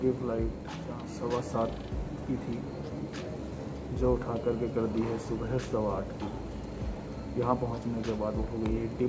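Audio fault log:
No fault in this audio.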